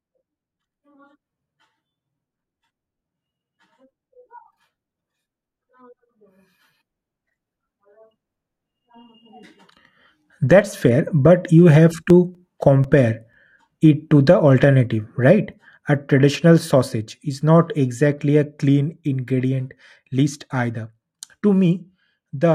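From 12.1 s to 13.58 s, just after "fair but you have" and running up to "it to the", the speech is interrupted by seven small, evenly spaced ticks, close to five a second. Each is a brief click or micro-dropout, the longest only a few milliseconds. These are CD scratch ticks. A scratch or blemish on the disc wipes out more data than error correction can restore on every revolution, so the player patches over or mutes those samples at each pass.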